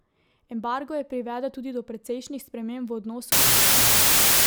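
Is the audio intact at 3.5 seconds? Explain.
No. From 3.32 s to the end, a wrong sample width garbles the speech. 32-bit data read as 16-bit give loud noise, with the speech buried, at half speed and lower pitch.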